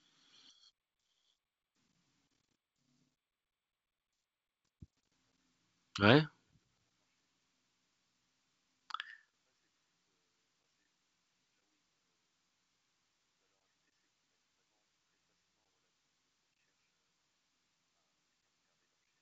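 No technical faults can be heard anywhere in the speech. It carries the sound of G.722 wideband telephone coding at 64 kbit/s, with the band ending at about 7.7 kHz and any codec hiss in the upper band faint at most.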